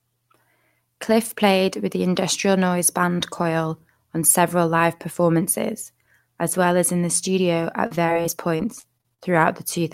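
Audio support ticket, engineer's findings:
Repeated packet loss (robotic sound), 7.86–9.22 s in speech. Choppy voice with pieces missing. Sixteen short dropouts, longest 41 ms. Jitter buffer/concealment repeatedly extending the last frame over missing audio, patching about a fifth of the stretch. Spectrogram: smeared, frozen harmonic bands repeating in short blocks with hard frame edges. Waveform: periodic, copy-like segments and abrupt envelope steps.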